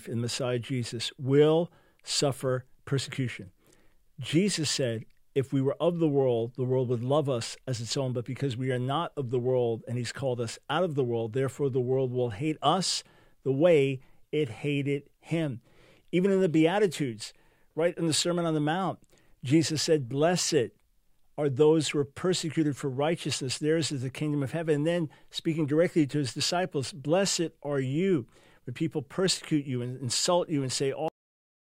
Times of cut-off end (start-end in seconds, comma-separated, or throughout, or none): 31.08-31.76